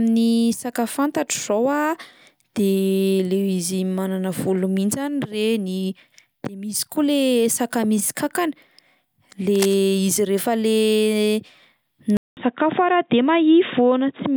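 From 9.55 to 9.74 s, just before "izy rehefa le", a short patch of cable scratch noise rides over the speech. It is a dense, ragged crackle, sitting roughly 10 dB below the speech. The uneven, gritty texture fits a contact whose resistance jumps about as it is disturbed, most likely a worn cable, connector or control being moved during the take.

At 12.17 s the sound drops out for about 200 ms and returns noticeably duller and boxier, carrying on that way to the end. Nothing above 3.8 kHz survives after the gap, so sibilance and air are gone, while loudness stays about the same. A faint new noise floor appears, around 50 dB under the speech. This sounds like an input switched to a poorer device, likely a fallback microphone or a headset's narrowband call profile taking over mid-recording.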